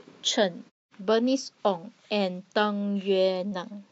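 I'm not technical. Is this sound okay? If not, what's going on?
Yes, nothing stood out as a problem when listening to this speech clip.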